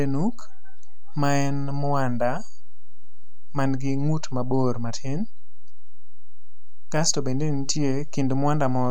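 Throughout the speech, a DC offset of about -21 dBFS pushes the waveform off zero, eating headroom without the audible tone of hum or rumble.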